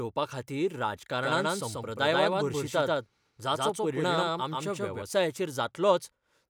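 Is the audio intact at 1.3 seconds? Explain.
No, at 1.3 s you're hearing a doubled audio track, running from 1.22 to 5.02 s. A second copy trails by about 150 ms at roughly equal level, likely from a slower capture path. It sounds like a dry, hard slapback echo with no room tail.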